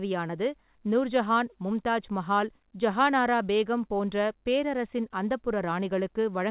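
The speech comes through a WebRTC call path with no technical faults, and its content stops at 4 kHz, which fits a 64 kbps G.711 A-law codec working as designed.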